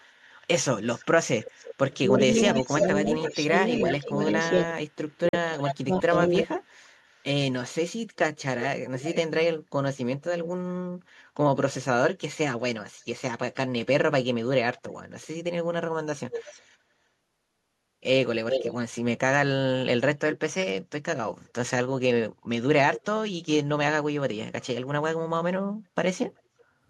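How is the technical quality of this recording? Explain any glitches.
The recording has clear call-path problems: repeated echo, speech being pushed down while both sides talk, and one short wireless gap.

Echo leak runs from 0.0 to 10.48 s, 14.77 to 16.62 s, 18.49 to 18.76 s, 20.32 to 23.04 s and 26.37 to 26.64 s. A delayed copy of the voice trails the original by 339 ms at first, drifting to 372 ms by the end. It is likely that a loudspeaker's output reached a microphone and the echo canceller failed to subtract it. The copy sits roughly 5 to 10 dB below the speech, level with it near 18.5 s, and only faintly audible at 26.4 s.

Speech suppressed in double talk appears between 1.72 and 6.61 s, while the echo is also present. When both sides are active, the voice dips sharply and breaks up, falling as much as roughly 35 dB and affecting around one and a half seconds of speech in total. 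The likely cause is an echo canceller that could not separate the local talker from the returning echo and so attenuated both.

A Bluetooth dropout cuts a silent hole of about 43 ms from 5.29 to 5.34 s. The sound then picks up further along, as if it had kept playing through the gap. Its length fits two lost codec frames, likely from audio packets that arrived too late at the headphones and were discarded.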